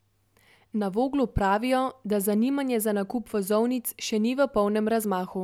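No faults detected; the speech runs without dropouts, glitches or level anomalies at any point.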